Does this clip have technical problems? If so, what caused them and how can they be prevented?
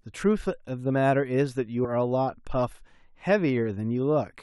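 Yes. At about 1.84 s the speech is broken by a very short glitch, the sign of damaged data in a compressed stream. Part of the encoded audio at that point was corrupted, so the decoder could not read those frames correctly and had to lose and regain sync before normal decoding resumed. Prevent it by carrying the stream over a checksummed, error-correcting transport and verifying file integrity after transfer.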